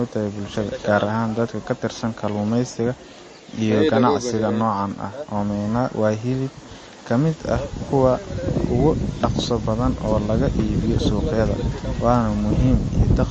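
Throughout the speech, the treble stops sharply at about 8.3 kHz. The sound is watery and swirly, and s sounds chirp metallically. This is likely MP3 compression at a low bitrate, near 32 kbps. Short of bits, the encoder cut the top band and dropped weak frequency lines.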